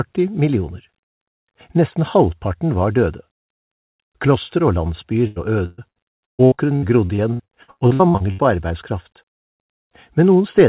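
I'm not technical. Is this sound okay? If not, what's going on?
No. From 5.27 to 8.41 s there is repeated packet loss (robotic sound): small chunks of audio kept getting lost or arriving too late on the call connection, about twenty times, some holes as long as 0.14 s. Each time, the system filled the hole by stretching the last bit of sound, so about a third of that stretch is patched. That makes it choppy, with pieces missing. The call line also trims everything above 4 kHz, giving a muffled tone.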